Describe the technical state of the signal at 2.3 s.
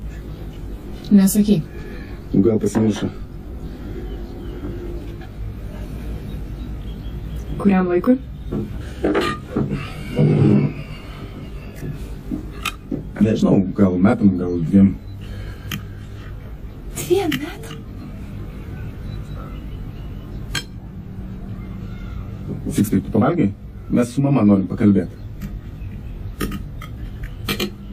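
At 2.3 s the signal shows channel delay (comb filtering), present across the whole clip rather than at this moment alone. One channel arrives around 20 ms after the other, and the two are folded to mono. Content shared by both cancels at regularly spaced frequencies, starting near 30 Hz and repeating roughly every 50 Hz. At this long a delay the sound is rough and slightly doubled.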